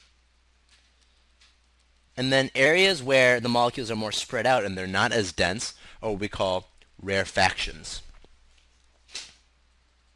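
From 2.66 to 4.58 s, a wrong sample rate plays samples faster than recorded: 1.09 times speed, 1.47 semitones higher, spectrogram harmonics visibly shifted up.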